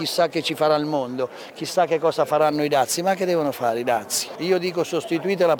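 From 2.41 s to the end, sample clock jitter sets in: the converter's clock wanders by a few microseconds, so each sample lands early or late. The resulting error, roughly 25 dB below the signal, is heard as a hiss that swells on loud, bright passages.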